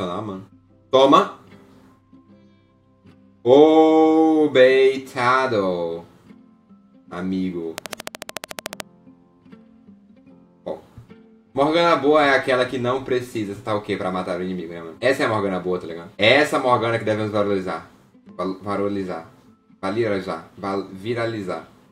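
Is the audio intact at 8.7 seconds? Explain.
No. A train of clicks runs from 7.78 to 8.81 s, about fifteen near-identical pulses at a regular 13.7 per second, standing out roughly 20 dB above the sound. This is likely interference from nearby equipment or a faulty connection or power supply, heard as steady ticking.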